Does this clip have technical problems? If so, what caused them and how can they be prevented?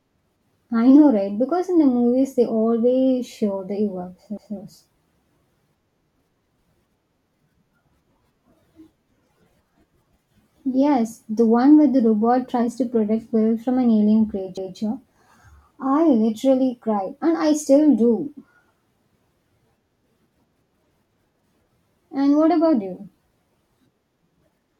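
Yes. The speech has overlapping chunks. At 4.37 to 4.57 s, and again at 14.57 to 14.77 s, a 200 ms stretch of audio plays twice, so the speech stutters briefly. The two events are 10.2 s apart. That points to audio handled in 10 s chunks, where each new chunk starts 200 ms before the previous one ended. The joins were not trimmed. To prevent it, align chunk boundaries so each chunk begins where the last one stopped, or discard the overlap before joining.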